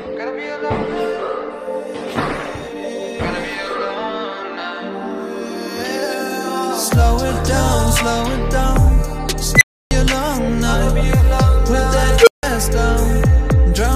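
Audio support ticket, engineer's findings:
Rising squeal at 9.55–9.91 s, around 2 kHz, swelling in 57 ms, clipping, then 0.3 s dead silence. Unstable filter: bad recursive coefficients, output runs away, overflows, mutes until reset.

Same pattern at 12.19–12.43 s, lower tone around 500 Hz, 77 ms build-up, 160 ms silence after. Same unstable filter.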